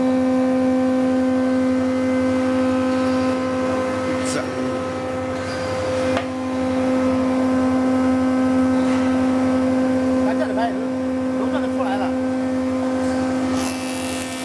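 No technical faults can be heard anywhere in the audio.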